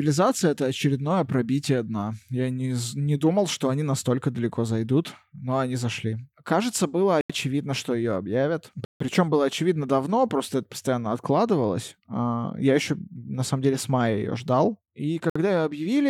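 Speech drops to dead silence three times: at 7.21 to 7.30 s for 85 ms, at 8.85 to 9.00 s for 154 ms, and at 15.30 to 15.36 s for 58 ms, then resumes. The likely cause is a Bluetooth stall, where delayed packets emptied the headphones' buffer and playback halted until resends arrived. On a waveform each gap is a flat line cutting the signal, and a spectrogram shows a clean vertical blank band across all frequencies.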